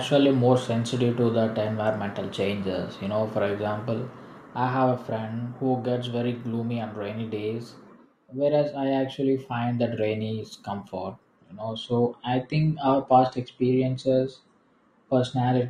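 At 11.37 s, just after "that rainy is comfort", the stream drops to a lower bitrate and stays there to the end of the clip. The player has switched to a cheaper rendition, as adaptive streams do when the connection slows. The change is abrupt but leaves no gap. Treble vanishes above about 9.7 kHz, and codec smearing grows. The sound fits a step down from roughly 96 to 32 kbit/s AAC.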